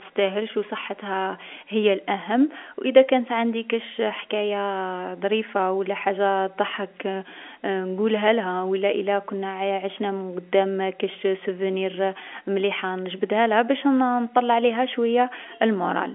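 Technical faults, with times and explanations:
No technical faults are present in this speech recording, which carries the narrow band of G.711 telephone coding, with its content confined to the 250 Hz to 3.4 kHz line band and nothing above 3.7 kHz, consistent with an A-law telephone connection.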